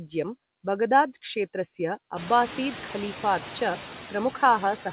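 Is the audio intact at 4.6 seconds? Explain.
No. At 4.6 s the background noise sinks between phrases and swells back under the speech. These noise suppressor artifacts persist throughout: bands judged to be noise are cut by about 8 dB frame by frame, acting on room noise that rose around 2 s.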